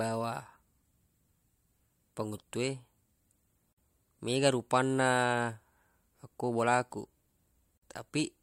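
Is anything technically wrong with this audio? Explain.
Yes, there's a gap at a join of encoded pieces, twice: 3.73 to 3.78 s and 7.78 to 7.82 s, about 48 and 49 ms, four seconds apart. The speech was likely encoded in 4 s chunks and joined untrimmed, leaving encoder delay and padding as brief dropouts with smeared edges.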